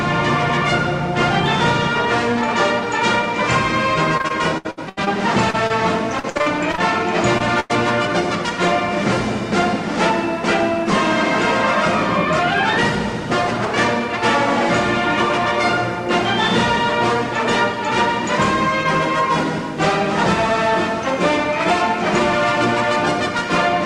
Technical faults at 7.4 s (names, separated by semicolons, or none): short concealed packet loss